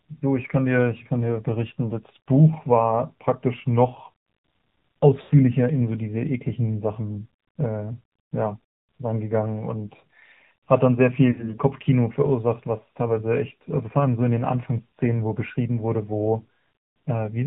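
Speech passed through the AMR narrowband mobile codec at a low rate, which sounds like about 7.4 kbps, cuts everything above 4 kHz and leaves the voice plainly buzzy and synthetic. Lost AMR speech frames strike twice, at 5.22 to 5.32 s and 11.32 to 11.55 s. The decoder repeats the last good settings with falling gain, smearing and fading the sound for roughly 80 ms and 60 ms, which fits runs of four and three 20 ms frames.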